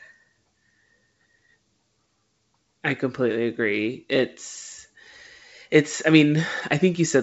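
Listening to this speech clip, carried over G.722 wideband telephone coding at 64 kbit/s with content reaching up to about 7.7 kHz, nothing stood out as a technical problem.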